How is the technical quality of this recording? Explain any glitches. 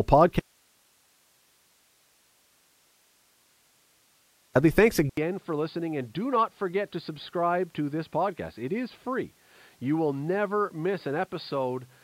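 The recording has two significant faults, both starting in the first half, the second continuing through the rest of the clip.

From 0.40 s to 4.55 s there is an audio dropout to a faint residue. The speech cuts out abruptly for about 4.2 s, leaving only hiss at roughly 40 dB below the normal speech level. This is likely a loss of the wanted signal while the downstream path stayed live and kept passing its own noise floor. The hard edges at both ends distinguish it from a natural pause or fade.

At 5.09 s, after an 80 ms silence, the sound changes character until the end: the input was likely switched to a poorer device. The speech becomes dull and boxy, with nothing above 4.9 kHz, and the level falls by around 10 dB. A different background noise appears, sitting roughly 45 dB below the speech. Together, the narrower band, the level change and the new noise point to a different microphone or a headset's call profile taking over the input.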